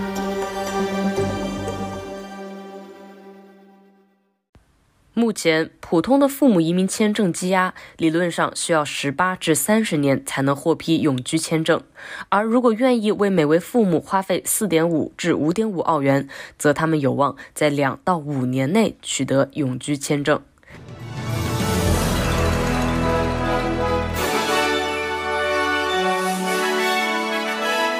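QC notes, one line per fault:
Nothing jumps out here, so there's no fault to flag on this one.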